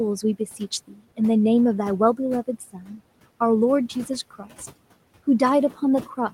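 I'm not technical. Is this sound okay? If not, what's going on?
No. This is speech cut by the noise suppressor. The suppressor mistook bits of speech for background noise and turned them down. From 0.59 to 1.01 seconds, and again from 2.73 to 3.0 seconds, soft sounds come out swallowed and faint.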